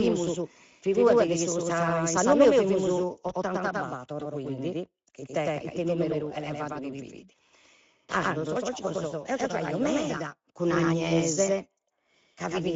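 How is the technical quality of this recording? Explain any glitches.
The technical quality is poor: the whole recording carries a second copy of itself and plainly audible codec damage, with two brief dropouts.

Throughout, a doubled audio track is audible. Every syllable is followed roughly a tenth of a second later by an identical, equally loud repeat with no reverberant tail or room colouring, so the sound smears into a clean, slapback-like echo. The cause is likely the same signal being mixed in twice, once through a slower path that lags by that fixed delay.

Speex codec artefacts also run the full length. The speech sounds hoarse and grainy, with a noisy, slightly synthetic edge, and the upper band above 4 kHz comes across as hissy fill rather than real detail. Speex is a low-bitrate CELP coder that models speech with a filter plus a coarse excitation signal. The level of damage fits a middle-quality setting somewhere near 17 kbps, where that excitation is too sparse to carry natural texture.

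VoIP packet loss concealed by the speech codec occurs twice. The first is at 3.27 to 3.33 s, right after "in s'annu meu fimus". The second is at 6.73 to 6.77 s, just before "chi fit". Each time, the sound briefly turns into a buzzy or noisy, fading smear and then recovers weakly. Each gap fits one lost 20 ms packet. The decoder filled the gap by extending its last pitch and filter at falling gain, and the following frames took a moment to regain strength.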